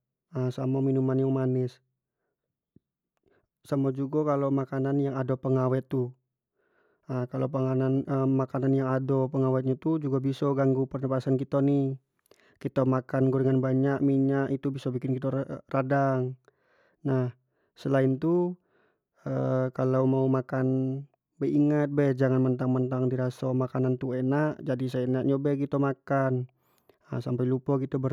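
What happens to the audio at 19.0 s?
Nothing goes wrong at 19.0 s: the speech carries on cleanly through that point with no dropout, click or distortion.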